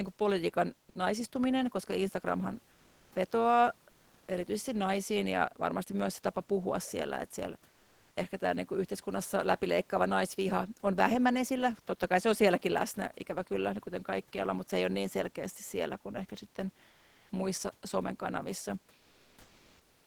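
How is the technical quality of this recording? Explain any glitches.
Two kinds of glitch show up, both from the sender's voice detection rather than the recording itself, and the room noise sits about 38 dB under the speech.

At 0.89 s, right after "kuin politiikan", about 60 ms of sound is dropped by the voice detector. It likely mistook that sound for background and stopped sending, which points to Opus DTX. The sound just cuts briefly to filler noise.

Comfort noise replaces the background three times: 3.91 to 4.27 s, 7.71 to 8.15 s (just before "ehkä tämä niin kuin"), and 16.89 to 17.29 s (between "siellä kuin ehkä sitten" and "muissa somen kanavissa"). This is likely DTX filling pauses with synthetic noise, so the real room tone becomes a smoother noise for 360 to 440 ms, at the same level or about 1 dB quieter.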